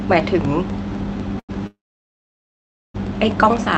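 From 0.2 s to the end, periodic USB or driver dropouts cut brief silences every 0.25 s, heard as regular ticks; the waveform shows thin silent notches, and the spectrogram shows evenly spaced vertical slits.

At 1.39–1.51 s, a short stall from a late packet holds the sound for about 92 ms with a faint buzz or dip, appearing as smeared horizontal streaks on the spectrogram.

From 1.67 s to 2.96 s, a call audio freeze, likely from delayed packets draining the jitter buffer, stretches the last sound into a fading buzz or hiss. About 1.2 s of flat, empty waveform follows before the audio resumes.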